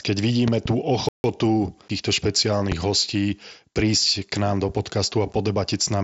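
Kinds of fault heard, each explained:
Loud pop: Sharp pulses sit on top of the speech, which carries on underneath without a break. A pair of pops falls between 0.48 and 0.68 s and a single one at 2.72 to 2.74 s, each peaking roughly 15 dB above the surrounding signal. This is likely a brief voltage spike, such as a switch or static discharge, passing through the audio chain. Unlike a dropout, nothing is removed. A burst of energy is added.
Playback stall: From 1.09 to 1.24 s the speech halts in mid-flow and the output goes completely silent for about 154 ms. This likely comes from the player running short of data or having its audio thread blocked briefly. Unlike a pop, nothing is added over the sound. Unlike a packet-loss gap, no filler noise or repeated fragment covers the hole.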